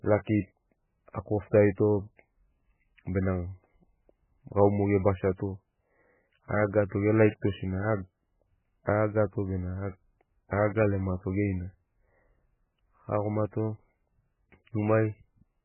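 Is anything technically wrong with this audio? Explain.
Yes. Throughout, the speech sounds watery and swirly, with nothing above 3 kHz. This is likely heavy MP3 compression at a very low bitrate, which cut the treble and dropped weak frequency lines.

At 8.86 s, a hiss leads one sharp attack by about 16 ms. This pre-echo comes from quantisation noise spread across a transform block, filling the quiet moment before the onset.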